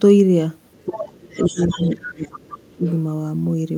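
From 0.73 to 1.0 s, 1.35 to 2.4 s and 2.85 to 2.97 s, the other side's voice leaks through faintly, about 15 dB below the speech and about 20 dB in the last scrap, likely from loudspeaker echo the canceller missed. This is a second voice, not a dip. Between 0.86 and 2.85 s the speech is suppressed in double talk, likely because the canceller turned down the talker along with the echo. It dips by up to roughly 30 dB for about 1.5 s in pieces, which sets it apart from leakage because the main voice itself drops away.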